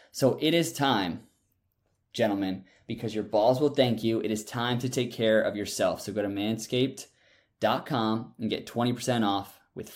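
A short speech recording, and nothing in it stands out as a technical fault at any point.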